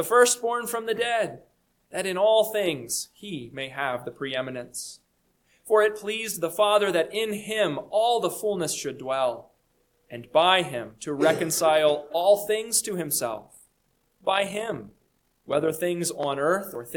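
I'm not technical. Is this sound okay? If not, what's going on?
No. From about 13.33 to 15.83 seconds there's overlap-add ripple: the audio was chopped into short overlapping slices and stitched back together unevenly, so the loudness pulses around fifty times a second. It comes across as a fast, buzzy flutter.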